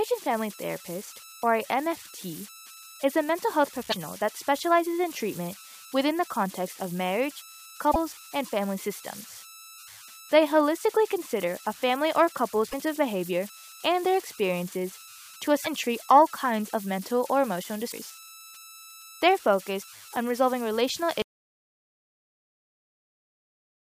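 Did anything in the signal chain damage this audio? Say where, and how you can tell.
Yes. Throughout the speech there is a steady tone, around 1.5 kHz, sitting about 20 dB below the signal and turning into a grainy hiss under the quieter passages. That points to the converter stage: converter idle tones, where an undithered delta-sigma converter given a very small input settles into repeating bit patterns. Those patterns produce a tone whose pitch follows the input's DC offset.

Five short glitches break through the speech, each lasting about 0.06 s, at 3.88, 7.90, 12.68, 15.61 and 17.88 s. This is damaged data in a compressed stream, in the codec or storage stage. Corrupted bytes make the decoder misread those frames and lose sync. It hunts for the next valid frame header, then resumes.

At 21.22 s the sound stops mid-flow and stays in dead digital silence to the end of the clip, with no room tone or noise floor left underneath. 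That is an audio dropout to silence, most likely an input or capture-link failure ahead of the recorder. The writer kept writing silence after the signal was lost, so whatever followed that point is gone rather than merely quiet.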